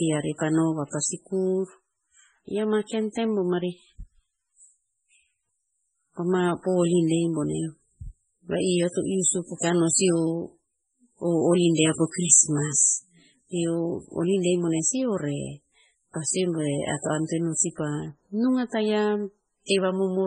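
Right from the start and for the whole 20 seconds of speech, nothing gets past 10 kHz, and the top end has that swirly, smeared quality of a starved MP3, which fits something around 16 kbit/s. It's most likely low-bitrate audio saved at a high bitrate: a later MP3 pass at a generous rate just copied the damage, so the file is big but still sounds thin and watery.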